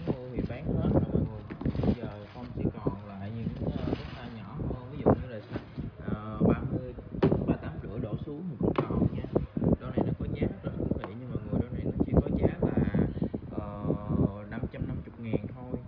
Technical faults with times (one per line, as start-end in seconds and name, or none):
none